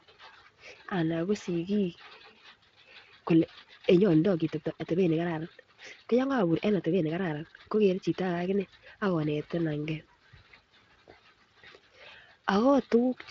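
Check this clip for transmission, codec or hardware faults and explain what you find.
One fault stands out, a time-stretched section from 3.27 s to 9.29 s. The speech runs about 1.51 times faster there while its pitch stays put, so it sounds rushed, with abrupt pace changes at both edges. The likely cause is software squeezing the passage to fit a length by dropping short slices of audio. The Speex encoding underneath shows only light wear.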